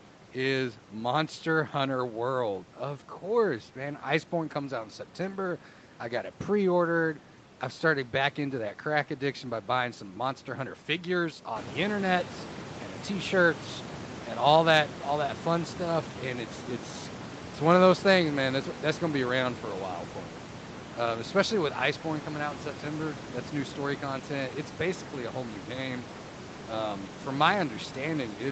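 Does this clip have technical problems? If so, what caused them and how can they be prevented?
No, no technical problems can be heard here.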